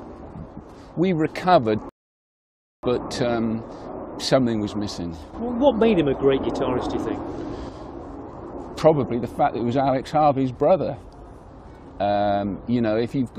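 At 1.89 s the audio drops abruptly into silence, then picks up again at 2.83 s from exactly the point where it broke off, with nothing skipped. This is a rebuffering stall: playback consumed all the audio that had been downloaded and had to wait for more data before it could continue. Because the player paused rather than jumping ahead, no material is lost, but the gap adds about 0.94 s to the running time.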